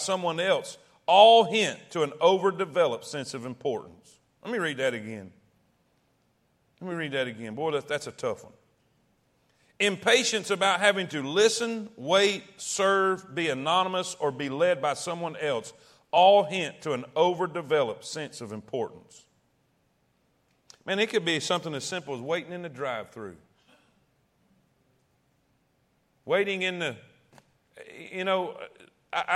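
At 16.16 s the speech jumps forward, a case of compressed frames skipped. A chunk of the encoded stream never got played, either because it was missing or because the decoder threw it out as damaged. Roughly 30 ms of audio is gone, which points to a single frame of about 26.1 ms.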